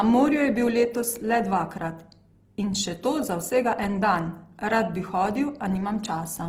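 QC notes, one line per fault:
Throughout, Opus compression: speech sounds grainy and rough across the full band, likely a music-mode Opus encode near 16 kbps filling starved bands with noise.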